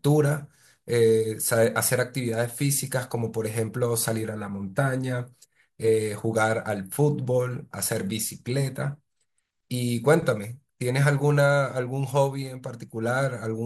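Speech recording with no audible technical faults.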